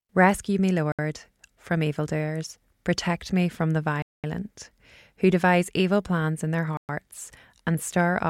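Three brief silences at 0.92 s (67 ms), 4.02 s (214 ms) and 6.77 s (118 ms) are Bluetooth stalls, likely from interference delaying packets until the headphone buffer emptied. Unlike a codec glitch, each is clean dead air rather than a click, warble or smeared fill.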